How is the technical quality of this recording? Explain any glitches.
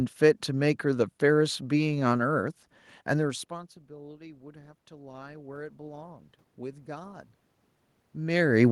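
One glitch affects the recording. Automatic gain rising from 3.24 to 7.25 s: the gain control slowly added about 8 dB, so voice and room noise swell together. It follows a drop of about 24 dB around 3 s, when the talker moved away.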